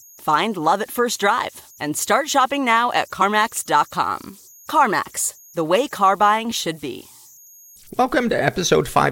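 Running through the whole speech recording are converter idle tones: a faint whistle around 7 kHz, about 31 dB below the signal, most audible in the pauses and heard as a grainy texture under the speech. A delta-sigma converter working without dither has settled into a repeating bit pattern on its small input, and that cycle produces a steady tone. On a spectrogram it appears as a thin horizontal line near 7 kHz across the full duration.

At 3.21 s, right after "start shopping now at", compressed frames are skipped. About two frames of 23.2 ms each never reach the output, either missing from the stream or rejected by the decoder as damaged, so the audio jumps forward by about 50 ms. The waveform shows a discontinuity there where the speech jumps ahead.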